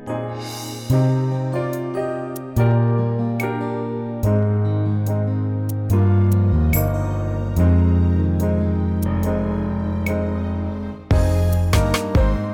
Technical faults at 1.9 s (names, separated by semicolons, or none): none